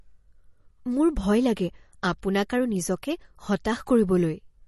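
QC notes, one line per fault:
throughout, MP3 compression: likely an MP3 encode near 40 kbps, removing everything above 12 kHz and flickering weak detail, so speech sounds dull, watery and swirly.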